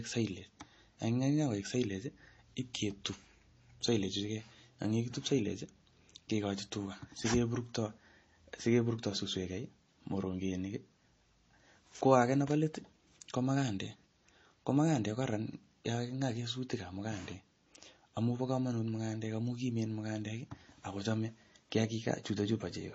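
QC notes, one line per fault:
Throughout, MP3 compression: nothing above 8.3 kHz, so the top end sounds cut off, and the speech carries a plainly audible watery swirl. Likely a low-bitrate MP3 encode, one that fits about 32 kbps, trimming treble and starving weak frequency lines of bits.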